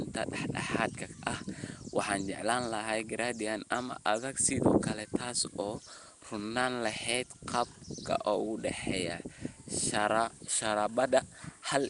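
Speech that sounds rough and smeared from start to finish, with a hissy halo around every syllable and a murky, underwater quality. Nothing is heard above 10.6 kHz. The likely cause is Nellymoser compression, the old Flash microphone codec. It spends a fixed two bits per sample on blocks of 256 samples, leaving weaker bands unfunded and filling them with noise. The plainly audible damage fits a bitrate around 44 kbps.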